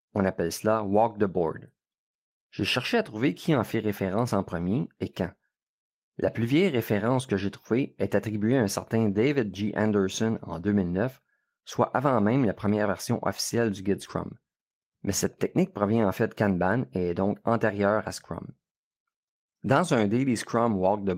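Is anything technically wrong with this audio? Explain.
Yes. Lost packets rebuilt from error correction occur at 3.53–3.63 s (between "cherché à trouver qui" and "fait référence en premier"), 9.11–9.33 s (after "attribuée à un certain"), 10.65 s, 14.05 s (after "version officielle du guide") and 18.05 s. Each lost stretch was replaced by a low-bitrate copy carried in the following packet, so there are no gaps, but those spans, roughly 20 to 120 ms long, sound rougher and noisier.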